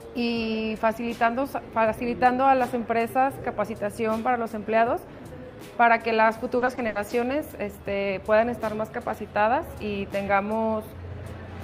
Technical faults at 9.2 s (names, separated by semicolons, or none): none